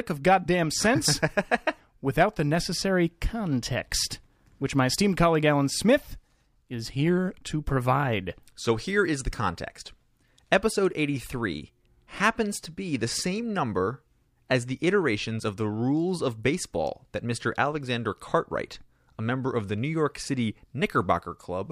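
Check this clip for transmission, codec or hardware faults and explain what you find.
No transmission, codec or hardware faults turn up in this speech clip.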